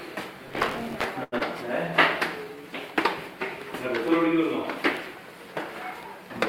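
From 0.48 to 1.04 s the processor falls behind and misses a long run of audio buffer deadlines, a pattern that fits buffers of around 5 ms. Each miss replays a scrap of old audio with hard edges, so this processor overload crackle is heard as gritty, tearing crackle laid over the sound.

At 1.23 to 1.34 s a packet arrives late and the jitter buffer runs dry. The receiver holds the last sound for 88 ms and then resumes from the same point. Nothing is lost, but this short stall from a late packet leaves one sound unnaturally drawn out, and the delay grows by 88 ms.

Just after, from 1.38 to 1.42 s, about 60 ms of audio never reaches the decoder. The receiver covers the gap with 16 ms of continued sound, and the delay drops by roughly 40 ms. This short concealed packet loss is a brief smear or wobble, with a sliver of audio simply gone.

From 2.36 to 2.63 s the jitter buffer slow-down rebuilds its reserve by repeating small pieces of the waveform, adding 45 ms. 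The audio plays at 86% speed with its pitch unchanged, so it sounds stretched.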